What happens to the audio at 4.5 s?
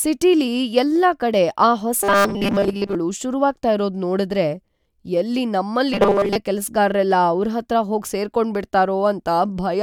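Nothing goes wrong at 4.5 s: the audio there is intact, with no fault to be heard.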